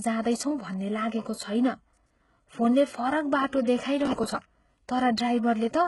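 Throughout the speech there is heavy codec damage: the treble sounds grainy and metallic, with sibilants rough, likely from HE-AAC compression at a very low bitrate, around 12 kbps. A spectrogram shows a hard ceiling at 11.5 kHz, with upper bands looking like smeared copies of lower ones.

From 4.06 to 4.46 s, just after "फोनले फरक बाटो", processor overload crackle tears through the sound. Short buffers of around ten milliseconds were skipped again and again, roughly thirty of them, leaving hard-edged gaps. The waveform shows repeated jagged discontinuities, and the spectrogram shows dense vertical broadband streaks.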